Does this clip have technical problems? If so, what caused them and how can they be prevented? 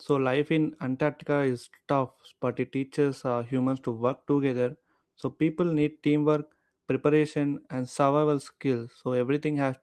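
Yes. A call bitrate drop from 3.15 to 6.71 s halves the rate from 32 to 16 kbps: speech turns rough and muffled, and the spectrogram shows high frequencies cut off. Preventing it means keeping enough bandwidth headroom.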